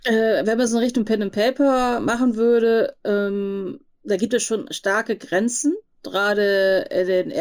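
Throughout the speech, the sample rate was raised using straight-line interpolation between samples, which is the fault known as imaging from linear upsampling. The sound points to a 16 kHz source converted to 44.1 kHz. That crude filter dulls the top of the original band and leaves a mirrored copy of the spectrum from 8 to 16 kHz, roughly 25 dB below the signal. It is heard as a faint metallic shimmer riding on sibilants.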